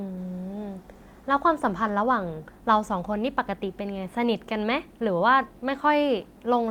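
Nothing in this recording of speech stood out as a technical problem on listening.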